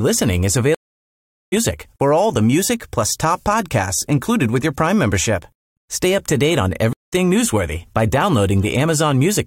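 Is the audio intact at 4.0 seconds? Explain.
Yes, the audio at 4.0 seconds is intact, with no dropout, click, distortion or other fault at that moment.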